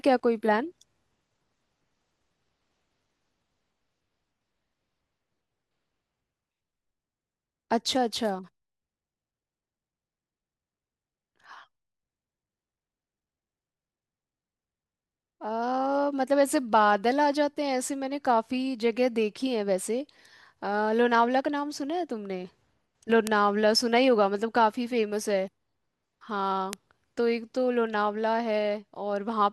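Bit error spikes at 23.27 s and 26.73 s: a single flipped bit throws one or two samples far off their true value and straight back, reaching about 0 dBFS and then about -6 dBFS. Each is heard as one sharp, broadband tick unrelated to the speech.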